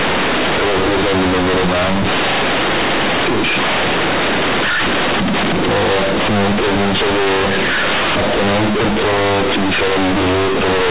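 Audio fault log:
Throughout: companded audio read as linear. A-law bytes are played as plain 8-bit samples without expansion, so every sign change swings the output across half its range. Quiet passages come out as loud as speech peaks, giving buzzy distortion and heavy noise in pauses.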